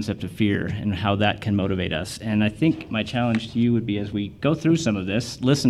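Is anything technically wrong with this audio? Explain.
No, nothing technically wrong can be heard in this audio.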